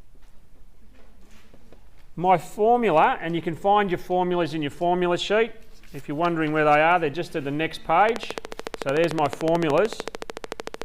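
From 8.09 s to 10.83 s a train of clicks ticks over the sound at a steady 13.6 per second, around forty sharp pops standing roughly 15 dB above the signal, likely interference or a faulty connection. A spectrogram shows evenly spaced thin vertical lines, and the waveform shows regular spikes.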